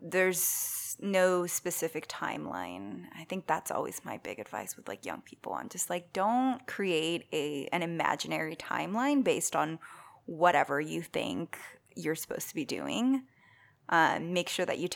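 No technical faults are audible.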